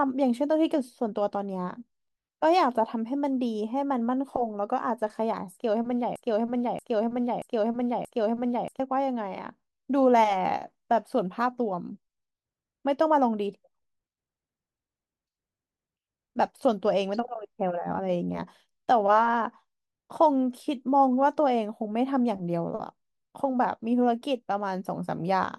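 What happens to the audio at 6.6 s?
At 6.6 s the speech is caught in a broken-record loop, running from 6.16 s to 8.80 s. A fragment of about 0.63 s plays back to back four times, each repeat identical and at full level, and whatever should have been heard in that stretch never arrives. The likely cause is a stall in the player, encoder or stream that kept resending its last held fragment. Unlike an echo, the repeats don't fade, and each fragment is far longer than a glitchy stutter.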